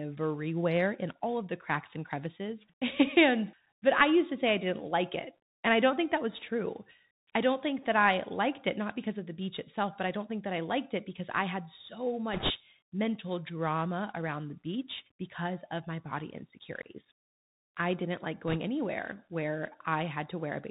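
Speech carried over a Bluetooth headset link throughout, with plainly audible Bluetooth CVSD headset codec damage. The encoder describes the waveform one bit at a time, up or down, with an adapting step size, which fits a 64 kbps stream. The band stops near 4 kHz, so the voice sounds thin and muffled. Loud, bright sounds outrun the step and distort, s sounds come out scratchy, and a grainy hiss sits under the speech.

On top of this come two bursts of bit errors on a Bluetooth voice link, from 12.33 to 12.51 s and from 18.48 to 18.57 s. Flipped bits on the link nudge the decoded waveform the wrong way. Because every bit carries the same small weight and the errors fade quickly, there are no loud clicks. Instead each burst adds a rushing, crackly noise over the speech. The first burst is a little rougher, at around 2 percent of bits corrupted against about 1.5 percent in the second.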